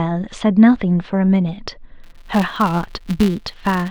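From 2.04 s on, a filter restarted on every block forgets its state, buzzing at 172 Hz; unlike steady hum, it follows the speech level.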